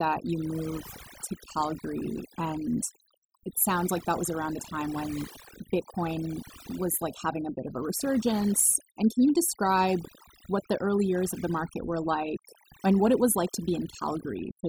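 Across the whole speech clip there is overdone noise removal. The noise reduction was set too strong. It pulled individual frequency bands down whenever they sat near its noise estimate. Quiet parts of the voice went too. Pauses fall to near silence with twinkling specks.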